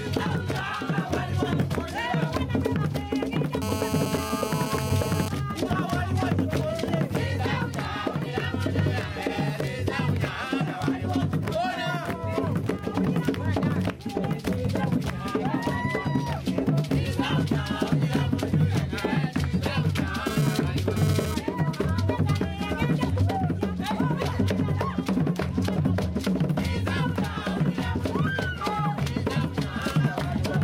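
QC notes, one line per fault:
3.62–5.28 s, GSM phone buzz: a hard, raspy 217 Hz buzz full of harmonics, about 7 dB under the sound. A nearby 2G phone on a call is pulsing its transmitter, and the audio circuit rectifies those pulses, so the buzz holds steady.
20.26–21.35 s, GSM phone buzz: the same 217 Hz rasp at about -7 dB, but choppy this time. The phone is moving data, so its bursts come and go.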